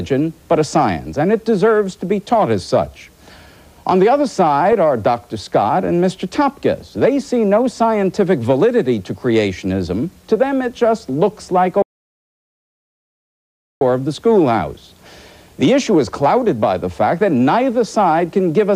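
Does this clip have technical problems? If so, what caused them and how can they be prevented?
Yes. There is an audio dropout to silence from 11.82 s to 13.81 s, about 2 s of sound lost. The audio stops abruptly mid-flow and returns just as suddenly, with no room tone in between. On a waveform this shows as a flat line; on a spectrogram, a dark vertical band across all frequencies. The likely cause is the input signal being briefly lost while the recorder kept writing silence. Secure cables and connections, check wireless links, and monitor input levels while recording.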